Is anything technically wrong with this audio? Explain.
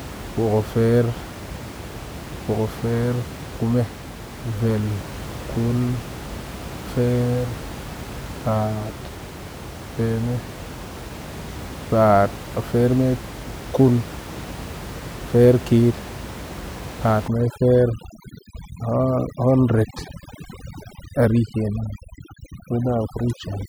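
Yes. From 17.28 s to the end, the speech sits over near-silent, twinkling gaps. This is overdone noise removal, gating bands near the room-noise floor and taking quiet speech detail with them.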